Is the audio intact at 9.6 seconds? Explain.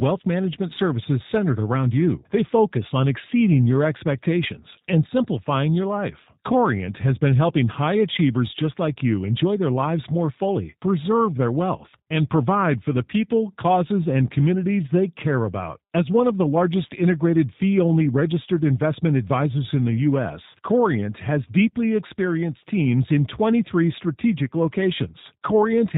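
No, at 9.6 s the speech carries the G.729 codec damage present throughout the clip, and it's plainly audible. The sound is rebuilt from a vocal tract filter, a pitch predictor and sparse pulses, which fits an 8 kbit/s G.729A stream, so nothing above 4 kHz survives and the speech comes across slightly rough and synthetic.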